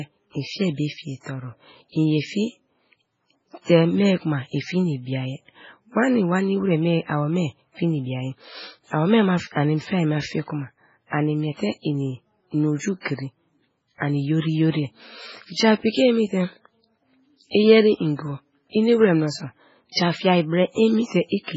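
Throughout the speech, the encoder has likely been starved of bits under MP3 compression, which fits a bitrate near 16 kbps. It cuts everything above 7.6 kHz and drops weak frequency lines that flicker between frames, so the speech sounds heavily watery and swirling, with chirpy s sounds and smeared attacks.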